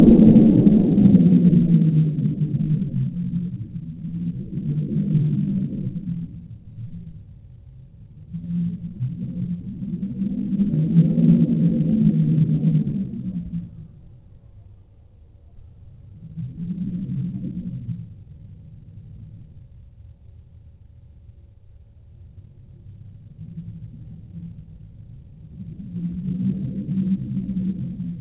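The audio shows no technical faults, and it carries the character of a WebRTC call path working as intended, with nothing above 4 kHz, a band limit that fits a narrowband telephone codec such as G.711 mu-law.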